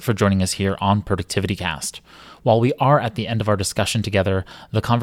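No technical faults can be heard anywhere in the speech. Nothing in the recording calls for a time stamp or a fault name.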